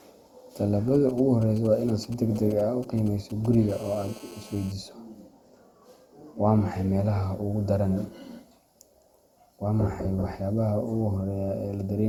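Across the whole recording the speech has a swirly, hollow, smeared quality, with consonant attacks blurred and a watery texture that is worse than a single 64 kbit/s Opus encode would produce. That points to generation loss, likely from the audio being decoded and re-encoded around five times. Each pass requantises on a shifted frame grid, so noise and spectral holes stack up. The bandwidth still extends to about 20.3 kHz.

From 0.95 s to 3.55 s, a galloping dit-dit-dit pattern of short buzzes sits about 25 dB below the speech. These are GSM signalling bursts: a nearby 2G phone sending brief groups of radio bursts while it signals to the network, and the audio circuit rectifying them. The rhythm is irregular and clustered, which tells it apart from a continuous buzz. Within each cluster, the buzz pitch matches the 217 Hz burst rate.

From 3.69 s to 4.72 s the pattern becomes a steady, hard, raspy GSM phone buzz at about 23 dB below the speech. 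Here the phone is in a call and transmits in bursts 217 times a second. The rectified pulses produce a 217 Hz tone with a dense stack of harmonics that ignores the speech entirely. Its harsh, buzzy edge and 217 Hz fundamental set it apart from mains hum at 50 or 60 Hz. Unlike the signalling bursts before it, it holds steady rather than galloping.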